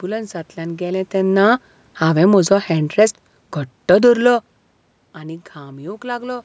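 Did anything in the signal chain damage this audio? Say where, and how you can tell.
Yes. Automatic gain falling, 0.82 to 3.18 s: the call processing's gain control judged the input too loud or its background too strong and eased down about 4 dB, the room background sinking with it.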